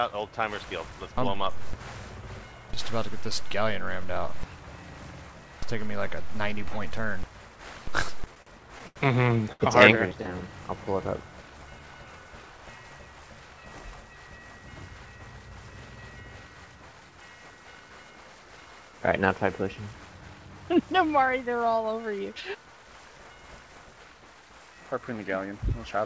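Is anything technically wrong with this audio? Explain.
Yes, there are three kinds of fault, all tied to packet timing on what sounds like a call path, where nothing above 8 kHz comes through, consistent with a wideband codec such as G.722.

From 8.16 to 8.98 s the audio stutters and drags, catching on itself seven times, with the longest hold about 81 ms. About 22 percent of that stretch is filler. These are repeated stalls (stutter). Packets kept arriving too late for the jitter buffer, which kept running dry. Each time, the receiver extended the last sound, about 177 ms in total, so nothing is lost, but the flow is broken.

At 9.53 s a single sound is held for about 72 ms before the audio picks up from the same point. This is a short stall from a late packet. One packet was not ready in time, so the receiver stretched what it already had until the packet arrived. The stretch lasts exactly as long as the delay, and nothing is skipped, though the hold sounds slightly unnatural.

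From 19.76 to 20.29 s and again from 24.91 to 25.59 s the audio runs noticeably hurried, about 10 percent fast, with the pitch unchanged. This is jitter buffer speed-up. The buffer held more audio than it aims for, so the receiver trimmed many tiny pitch-period-sized slices, roughly 70 ms in each span, to bring the latency back down.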